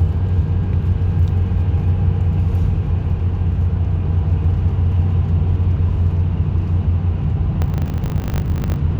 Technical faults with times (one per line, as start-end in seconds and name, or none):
7.62-8.80 filter restarted on every block